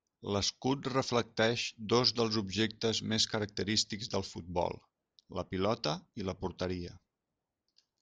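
No dropouts, clipping, glitches or other transport or processing faults are audible anywhere in the speech.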